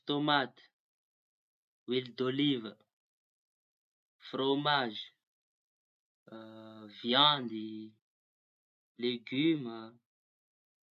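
A speech recording with no audible technical faults.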